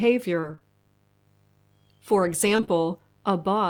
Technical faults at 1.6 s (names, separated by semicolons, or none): mains buzz